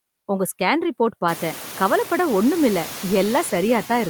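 A speech clip with noise suppressor artifacts throughout. Background noise dips by about 8 dB between phrases and swells back under speech. Unlike a gate, it never drops to silence. The room noise rises by about 24 dB at roughly 1.5 s and stays about 16 dB below the speech.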